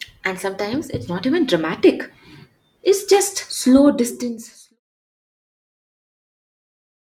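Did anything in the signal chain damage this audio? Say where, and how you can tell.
No, nothing damaged this audio.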